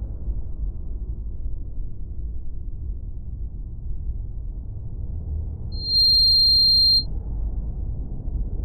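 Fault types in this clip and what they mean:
Loudspeaker feedback squeal: a piercing single tone near 4.2 kHz swells up over roughly a third of a second from 5.72 s and holds until 7.07 s, standing about 10 dB above the sound, because the microphone re-amplifies its own loudspeaker with more than unity loop gain at that frequency.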